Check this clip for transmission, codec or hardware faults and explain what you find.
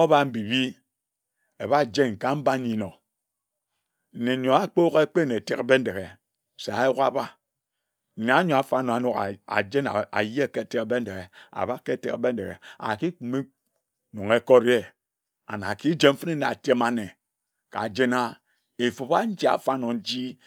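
No transmission, codec or hardware faults.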